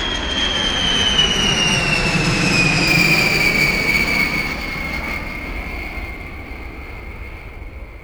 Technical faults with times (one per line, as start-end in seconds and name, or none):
2.87-8.04 sample clock jitter